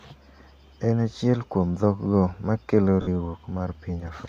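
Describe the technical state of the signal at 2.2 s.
At 2.2 s the speech comes through intact, with no fault to be heard at that moment.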